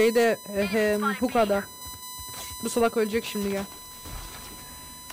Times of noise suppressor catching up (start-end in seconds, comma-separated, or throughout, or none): none